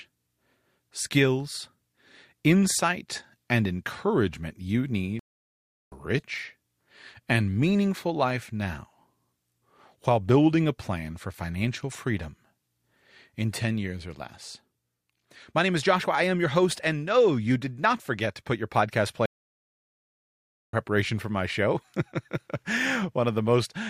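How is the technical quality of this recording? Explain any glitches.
The recording is speech interrupted twice by a stream reconnect, at 5.19 to 5.95 s and at 19.26 to 20.74 s. The connection dropped, so the player stopped, reconnected and started a new decoder mid-stream. You hear silence of about 0.72 s and then 1.48 s. Each time the speech resumes further along, skipping roughly half a second the first time and about a second the second time, with a brief muted or faded start.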